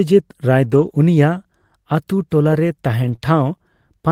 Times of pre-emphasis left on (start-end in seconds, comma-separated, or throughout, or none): none